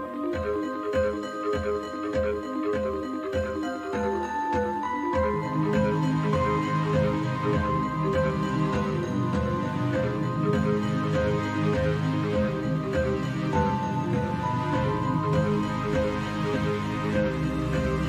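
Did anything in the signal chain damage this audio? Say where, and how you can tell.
No, nothing I can hear in this audio points to damage at any stage of the signal chain.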